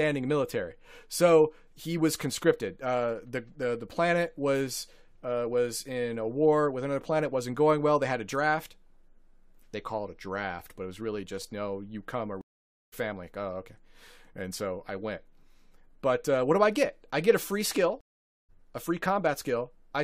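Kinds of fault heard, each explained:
Stream reconnect: the connection dropped, leaving about half a second of silence at 12.41 s and 18.01 s. A fresh decoder then resumed the speech roughly a few tenths of a second further on, so material is skipped, unlike a plain dropout.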